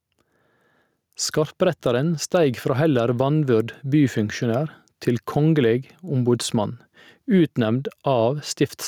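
Throughout the speech there is gain pumping, with the gain swinging by around 5 dB. The likely cause is input gain set far too high, with a fast limiter clamping each peak and squashing the dynamics.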